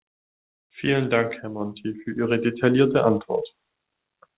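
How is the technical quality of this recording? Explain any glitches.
No audible glitches or faults.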